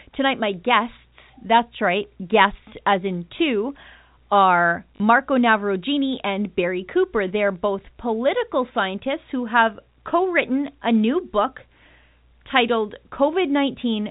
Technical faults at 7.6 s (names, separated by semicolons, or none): none